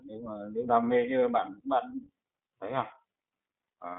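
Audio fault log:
throughout, iLBC codec: the speech is confined to narrowband, with nothing above 4 kHz, so sibilants and consonant detail sound dull and telephone-like. The plainly audible roughness and slightly synthetic texture come from the codec rebuilding each short frame's excitation on its own, without drawing on the frame before, so small discontinuities build into a grainy, buzzy edge on the speech. The character fits 20 ms frames at roughly 15 kbps.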